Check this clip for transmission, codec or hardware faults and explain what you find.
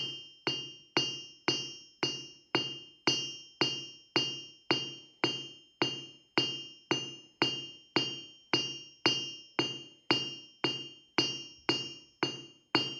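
Nothing turned up here worth flagging, so the recording can be taken as it stands, with no transmission or hardware trouble to report.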